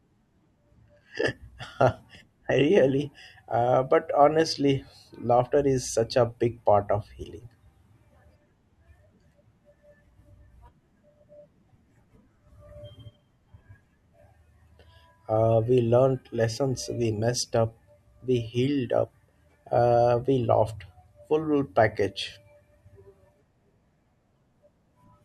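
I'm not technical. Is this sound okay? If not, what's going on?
Yes, nothing wrong can be heard in this recording.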